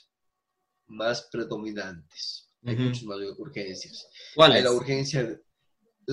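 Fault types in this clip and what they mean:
Nothing to flag here, since no faults turn up anywhere in the audio.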